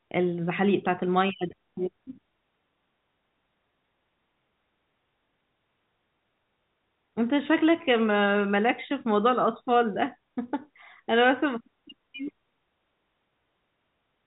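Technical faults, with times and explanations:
No faults found; the speech sits in the G.711 telephone coding band, with nothing above about 3.8 kHz and only the faint level-following quantisation hiss that format carries.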